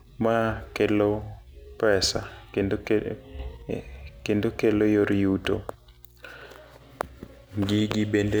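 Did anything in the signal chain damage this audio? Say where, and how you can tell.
Yes. Mains hum runs through the whole recording, entering at the analogue wiring stage, most plausibly a ground loop or a transformer close to the cabling. It is a steady 60 Hz tone sitting roughly 30 dB below the speech, present even in pauses. On a spectrogram it shows as an unbroken horizontal line at 60 Hz, with fainter lines at low multiples. On the waveform the gaps between phrases carry a regular low-frequency ripple instead of flat silence.

A sudden gain jump occurs right after "pesa kendo ke", from 3.39 to 3.62 s. The level rises by 6 dB in a single step and then drops back, with the hum and background noise jumping along with the speech. That shared jump is what places it in the digital chain rather than with the talker. The likely cause is a gain setting applied in call processing or the driver without a ramp. 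The waveform envelope shows abrupt vertical edges at both ends, and a spectrogram shows a uniform brightness band across all frequencies.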